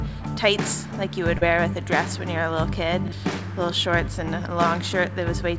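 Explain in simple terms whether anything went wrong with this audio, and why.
Short concealed packet loss at 1.38 to 1.43 s: about 40 ms of audio arrived too late, so the receiver patched the gap by extending the sound just before it and then blending back into the real audio. It comes through as a brief smear or wobble.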